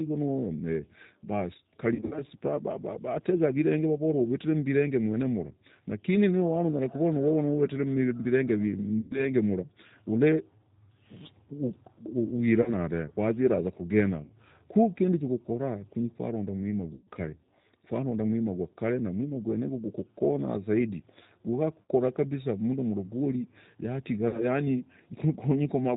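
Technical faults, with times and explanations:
Throughout: G.729 codec, plainly audible. Speech sounds rough and slightly synthetic with nothing above 4 kHz, because the 8 kbit/s G.729A coder rebuilds each frame from a filter, pitch and a few pulses.
1.95–2.22 s: VoIP packet loss concealed by the speech codec. The speech turns buzzy and fades in patches, with 120 ms lost across 160 ms in runs up to 60 ms; the decoder stretches its last pitch and filter at falling gain.
9.01–9.26 s, just before "mra ole": VoIP packet loss concealed by the speech codec. About 100 ms goes to a fading, tonal smear as the decoder extrapolates, and the speech returns weak.
12.62–12.72 s, just before "dave waziraza", 14.24–14.31 s, 21.83–21.89 s and 24.28–24.45 s: VoIP packet loss concealed by the speech codec. These are brief buzzy or noisy stretches, where 40 to 60 ms of speech was invented from the preceding frame.
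16.95–17.08 s, just after "chokora kunyi kwaronda mwima": VoIP packet loss concealed by the speech codec. A 120 ms gap is filled with a decaying buzz, and the distortion lingers briefly because each frame builds on the last.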